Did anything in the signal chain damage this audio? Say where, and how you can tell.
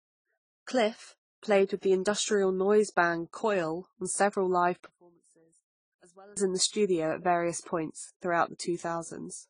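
Yes. Across the whole speech clip there's a layered lossy-codec sound, nothing above 10 kHz, with MP3-style smearing under AAC-style swirl. That's likely transcoding between lossy codecs: a 42 kbit/s MP3 re-encoded to AAC-LC at 24 kbit/s, each pass stacking artefacts.

From 4.86 to 6.37 s, right after "on several live" and until "in the studio at", the voice drops by about 27 dB into a faint residue. That's the signature of one channel inverted, likely in wiring or a mono fold-down, so the centred content cancels.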